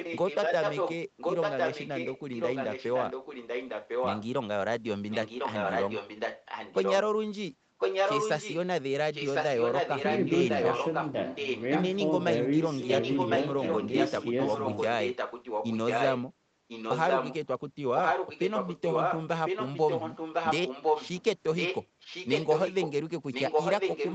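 Echo leak runs through the speech in six stretches: 0.0 to 4.29 s, 5.09 to 6.96 s, 7.78 to 8.57 s, 9.12 to 11.85 s, 12.81 to 17.38 s, and 17.95 s to the end. A second copy of the speech trails the original by about 1.05 s. It is roughly as loud as the direct speech, and somewhat quieter from 5.09 to 6.96 s. The likely cause is a loudspeaker on one side of the call whose echo canceller failed to remove the returning signal.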